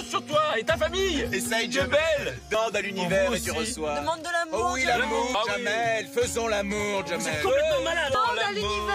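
Skips at 2.55, 5.35 and 8.15 s, about a fifth of a second each, are audio missing between chunks, likely lost while 3-second recording chunks were switched.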